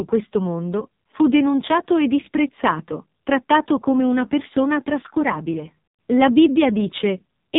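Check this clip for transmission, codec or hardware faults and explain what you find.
One fault, present throughout: the speech sounds buzzy, synthetic and muffled, with nothing above about 3.8 kHz. That is heavy AMR narrowband mobile codec damage: a vocal-tract model rebuilt from a few pulses per frame, consistent with a low mode near 6 kbps.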